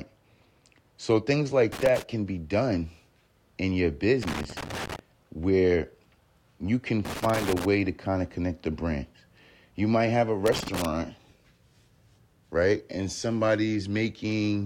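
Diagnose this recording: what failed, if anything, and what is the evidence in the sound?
The analogue wiring failed: four irregular bursts of loose connector crackle break into the speech at 1.72–2.02 s, 4.23–4.99 s after "in your", 7.05–7.65 s between "you can" and "to kind of connect", and 10.46–10.85 s after "might have a". A worn contact is making and breaking, chopping the signal. The waveform shows ragged dropouts and sharp spikes, and the spectrogram shows scattered broadband vertical streaks across each burst.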